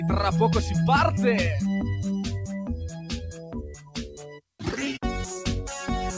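From the start and through the whole clip, a noise suppressor built for speech is acting on music or other sounds. It treats steady tones, ambience and decaying tails as noise, so the level pumps up and down by roughly ten decibels while attacks pass mostly intact. On a waveform the envelope breathes unevenly between onsets, and a spectrogram shows sustained bands fading in patches after each attack, all below a hard ceiling at 8 kHz from the call codec path, which fits G.722 at 64 kbps.

Between 2.88 and 4.42 s, the noise suppressor cuts this sound harder than the rest, bottoming out about 15 dB down, for about a second and a half in all. The suppressor has judged the held or fading material here to be noise, so it sinks and its decay is chopped short, while any sudden edges still poke through. The audio sounds thinned. On the waveform this span looks like a carved-out trough, and on a spectrogram the steady partials dim or vanish while transient columns stay visible.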